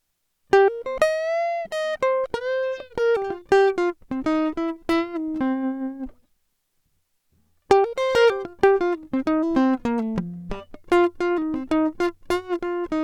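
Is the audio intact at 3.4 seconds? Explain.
No, not quite. There's a short stall from a late packet running from about 3.39 to 3.43 s in the music. A packet didn't turn up in time, the jitter buffer ran dry, and the receiver padded the gap by stretching the last bit of sound for about 20 ms before carrying on from where it left off. Nothing actually goes missing, but that moment hangs a touch too long with a faint buzzy smear, and everything after sits 20 ms later.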